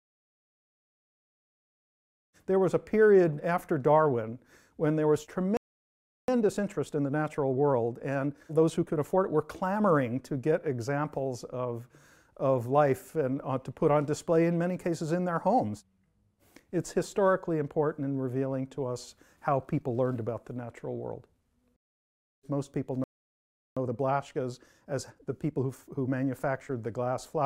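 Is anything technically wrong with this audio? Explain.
Yes, there are two pairs of problems, each a dropout followed by a hurried stretch.

The first playback stall hits at 5.57 s: the sound cuts out mid-flow and stays silent for about 0.71 s, until 6.28 s. The second comes at 23.04 s and lasts about 0.73 s, to 23.77 s. Both gaps sound like the player likely ran dry of data or had its thread held up, so nothing reached the output until it recovered.

Right after each gap you get time-compressed catch-up. From 6.28 to 9.28 s the audio runs at 1.15 times normal speed, and from 23.77 to 26.77 s at 1.1 times. The player is working off the backlog built up during the stall by snipping out small chunks and cross-fading across the joins. So the pitch stays put, but for those three seconds everything feels rushed.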